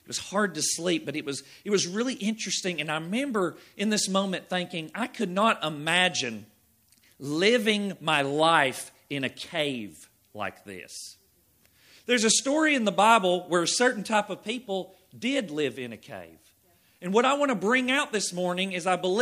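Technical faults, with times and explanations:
No technical faults are audible anywhere in the clip.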